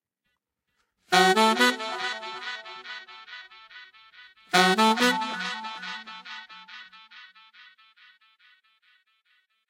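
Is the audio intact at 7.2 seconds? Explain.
Yes, the audio is intact at 7.2 seconds, with no dropout, click, distortion or other fault at that moment.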